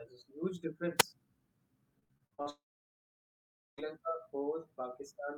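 Wireless microphone squelch dropout at 0.98 to 1.03 s: the radio link from the analogue FM microphone weakens, hiss briefly rises, and the receiver's squelch mutes the output for only about 3.5 ms before the speech returns.

Repeated packet loss (robotic sound) runs from 1.99 to 2.48 s. Seven gaps, the longest 58 ms, are each patched by stretching the preceding sound, so about half of this span is concealed. The speech turns choppy, with pieces missing.

A long network dropout follows from 2.50 to 3.80 s. The last sound is carried on as a fading buzz or hiss for roughly a tenth of a second, then about 1.17 s of near silence. Speech resumes without the missing 1.3 s, most likely because no audio packets arrived during that stretch.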